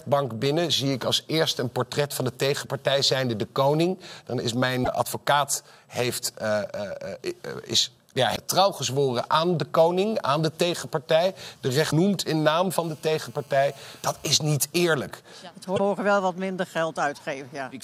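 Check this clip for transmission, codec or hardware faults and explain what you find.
Two faults are present: damaged data in the compressed stream, and GSM phone buzz.

Damaged data in a compressed stream occurs four times, at 4.82–4.88 s, 8.32–8.37 s, 11.87–11.93 s and 15.74–15.80 s, each roughly 50–60 ms. Corrupted frames make the decoder lose sync and hunt for the next header, giving a brief chirp or blip.

GSM phone buzz runs from 12.83 to 14.25 s, about 30 dB below the signal. A nearby 2G handset's 217 Hz transmit bursts are rectified in the audio circuitry, producing a hard, raspy buzz rich in harmonics. It is nearly steady, as during a call, and its 217 Hz pitch separates it from 50 or 60 Hz mains hum.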